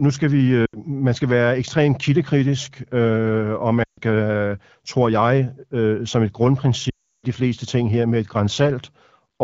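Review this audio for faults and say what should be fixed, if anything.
Lost AMR speech frames: radio errors corrupted runs of frames, so the decoder filled each gap by repeating the last good pitch and vocal-tract settings at falling gain. At 0.65–0.79 s the sound briefly drops to near silence. At 3.83–4.00 s it drops to near silence. At 6.90–7.26 s it drains to silence, then returns weak or rough. Stronger error protection or better radio coverage on the link would prevent these dropouts.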